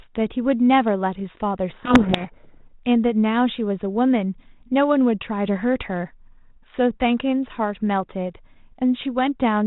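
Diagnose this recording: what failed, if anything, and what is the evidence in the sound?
From 1.7 to 2.71 s the speech is buried in harsh distortion. This is a codec payload misread at the codec stage: the decoder reads the G.726 code words in the wrong bit order, so the ADPCM differences are wrong and the adaptive predictor goes astray.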